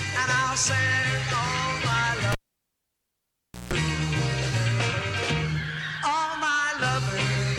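At 2.32 s a cable is pulled and plugged in: a pop cuts the sound to near silence for about 1.36 s, then a 165 ms burst of 60 Hz mains buzz as the plug's tip touches first, and a second pop restores it at 3.73 s. The bracketing pops and the buzz set it apart from a plain dropout.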